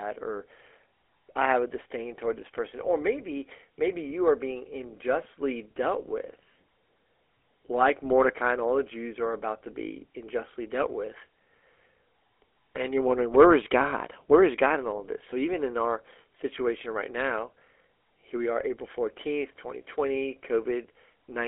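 Throughout the speech, the sound carries GSM full-rate codec damage. The codec models the vocal tract and drives it with sparse regular pulses, which fits a 13 kbps stream. Voices turn plainly buzzy and gravelly. The band runs roughly 300 Hz to 3.4 kHz, with nothing above 3.7 kHz.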